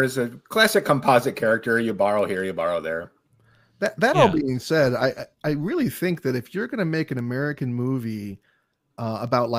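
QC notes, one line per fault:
0.11–9.48 s, word clock ticks: a steady train of sharp ticks of uneven strength, roughly one every fifth of a second and around fifty in all, runs under the speech. The receiving device is clocked independently of the digital link feeding it, and the two clocks disagree by something on the order of 100 parts per million. Each time they drift a full sample apart, a single sample is dropped or repeated, leaving a brief discontinuity that is heard as a tick.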